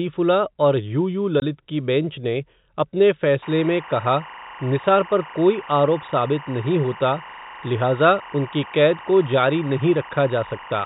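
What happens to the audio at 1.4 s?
At 1.40 s the speech drops out completely for about 20 ms, until 1.42 s, just before "की बेंच ने अपने". That's packet loss filled with silence: a stretch of the stream never arrived, and the receiver played dead air instead of the missing audio. The gap's length fits two 10 ms packets. Because the waveform is cut off abruptly on both sides, the gap has hard edges. The band-limited G.711 telephone sound carries on through it.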